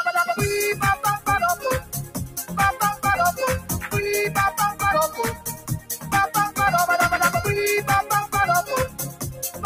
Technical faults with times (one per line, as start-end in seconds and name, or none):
0.00-9.66 noise suppressor applied to music or sounds
1.80-2.52 sound cut by the noise suppressor
3.60-3.91 sound cut by the noise suppressor
5.09-6.13 sound cut by the noise suppressor
8.88-9.66 sound cut by the noise suppressor